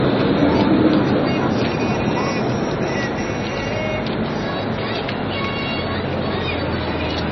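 From start to finish the sound is dulled by what is likely MP3 compression at a very low bitrate, around 24 kbps, with heavy damage. Nothing survives above about 5.9 kHz, so the top is cut flat and airless. Quiet frequency detail flickers in and out between frames, giving a watery, swirling texture with metallic chirps, and sharp onsets smear. On a spectrogram this shows as a hard horizontal ceiling near 5.9 kHz and patchy, blotchy holes below it.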